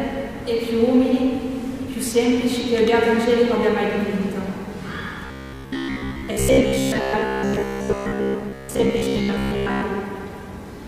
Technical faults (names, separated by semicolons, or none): robotic sound from repeated short buffers